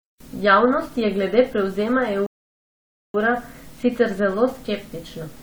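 A rebuffering stall runs from 2.26 s to 3.14 s, just after "je glede prevzema". The player exhausted its downloaded audio and paused until more data arrived, so the speech drops abruptly into silence for roughly 0.88 s. When playback resumes, it picks up at exactly the point where it stopped. No speech is skipped or repeated, but the gap stretches the clip by that added pause and breaks the natural rhythm of the sentence.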